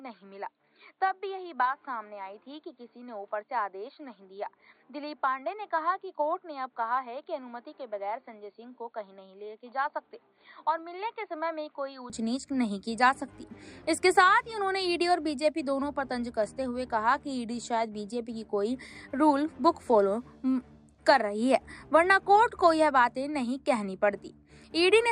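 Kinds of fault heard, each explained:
Input switched to a poorer device: The recording likely began on a lesser input, such as a headset's call profile, and moved to the better microphone at 12.10 s with no gap. Until then nothing reaches above 4.5 kHz, so the sound is dull and boxy, sits about 10 dB quieter, and carries a faint noise floor of its own, some 50 dB down. After the switch the top end and level return abruptly.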